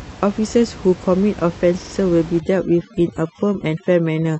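At 1.77 s the audio stutters through 1.92 s: repeated frames. A single block of about 46.4 ms plays three extra times, so the same fragment is heard four times in a row. The repeats add roughly 139 ms to the running time.

From 2.40 s to the end, overdone noise removal takes over. The reduction is pushing individual frequency bands down whenever they fall near its noise estimate, so the room noise, which sat about 18 dB below the speech, turns to near silence with twinkling specks. Quieter parts of the speech are stripped away with it.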